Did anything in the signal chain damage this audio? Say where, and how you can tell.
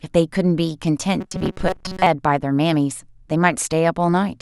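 Yes. From 1.21 to 2.07 s the speech turns into a rigid, metallic buzz locked at 188 Hz, still roughly following the syllables. This is robotic sound from repeated short buffers, and it most likely comes from the driver or buffer stage. Audio was arriving too late, so the software filled the gap by replaying a very short chunk, about 5.3 ms, which sets the 188 Hz buzz. Around half the real audio was skipped.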